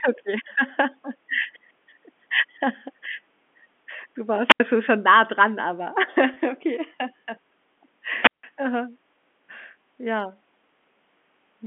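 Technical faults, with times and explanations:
4.47–4.60 s and 8.20–8.44 s, wireless microphone squelch dropout: the receiver's squelch mutes the output as the FM signal fades, giving a short rise of hiss, then near silence of about 81 ms before "schon schon nah dran", and about 165 ms in the second event.
6.34–6.36 s, packet loss with pitch repetition: a roughly 20 ms gap just after "schon nah dran aber", which fits a single lost packet, is bridged by repeating the last pitch period, so the speech briefly sounds held and slightly buzzy.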